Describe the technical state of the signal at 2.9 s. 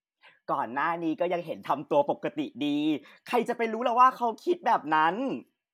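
At 2.9 s the signal is intact, with no dropout, distortion, clipping or other fault at that point in the speech.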